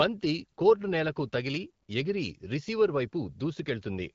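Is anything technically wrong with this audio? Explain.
No, nothing technically wrong is audible here.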